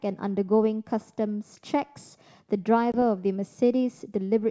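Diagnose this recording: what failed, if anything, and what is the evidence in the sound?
Network stage: packet loss on an ADPCM call dropped about one packet of this G.722 speech, leaving a hard-edged 20 ms silent gap from 2.92 to 2.97 s.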